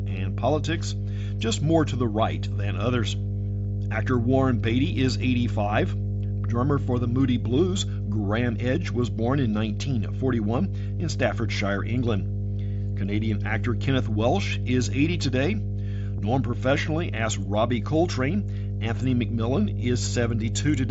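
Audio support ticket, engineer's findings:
Mains hum, whole clip. Steady 50 Hz tone, roughly as loud as the speech itself. Probable ground loop or nearby transformer coupling the power line into the signal path. Check grounding and cabling at the headset's charging or audio connection.

Concealed Bluetooth headset packet loss at 10.99 s and 16.17 s. Single lost frame each time, 7.5 ms of audio. Receiver filled each gap by repeating the best-matching stretch of recent waveform. Short isolated losses, so both repairs are brief. Probable radio link dropout.

Link runs over the Bluetooth mSBC headset codec. Speech band reaches 8 kHz, with light grainy codec texture on louder passages, consistent with a standard mSBC stream around 61 kbps.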